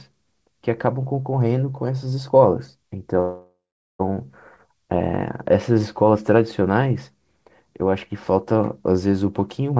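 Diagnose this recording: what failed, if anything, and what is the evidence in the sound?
A call audio freeze runs from 3.20 to 4.01 s. The speech stops and a fading buzz continues the last sound. After roughly 0.4 s it settles into silence. Then the speech resumes where it broke off, with nothing lost. About 0.8 s of filler was inserted, so the audio now lags by that much. The stage is the network and jitter buffer. Packets were likely delayed in transit, the buffer ran dry, and the receiver padded the gap.

A jitter buffer speed-up occurs at the very end, from 9.72 to 9.79 s. The speech plays at about 155 percent speed, yet the pitch holds steady. It sounds briefly rushed. The stage is the receiver's jitter buffer. It held more audio than its target, so it trimmed short pitch-period slices, around 50 ms in total, to reduce the delay. The band limit at 8 kHz fits a G.722 call codec.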